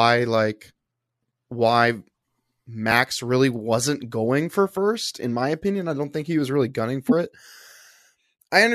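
Right near the end, around 7.08 to 7.12 s, the speech jumps forward where compressed frames were skipped. Compressed frames never got decoded, so roughly 70 ms of audio just vanishes.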